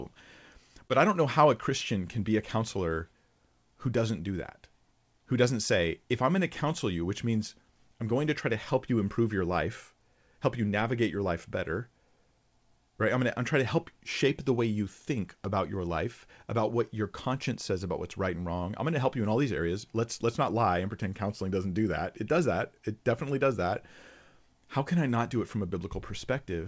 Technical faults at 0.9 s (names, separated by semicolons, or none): short concealed packet loss